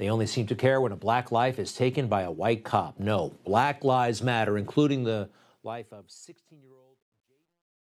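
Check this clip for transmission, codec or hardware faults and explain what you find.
The clip has one fault: truncation distortion on the closing fade of this speech. The fade-out, starting around 5 s, is damaged in its quiet tail.

From 5.22 s, just after "black lives matter including", to 7.93 s, the fade stage keeps too few bits and adds no dither. This fits 12-bit precision. Low levels snap to coarse square steps. The sound turns gritty, worst from 6.35 to 7.94 s. A waveform shows staircase steps. A spectrogram shows grainy broadband hash.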